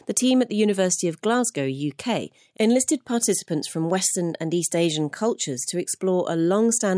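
Nothing technically wrong turns up anywhere in this audio; it's a fault-free recording as far as a careful listen can tell.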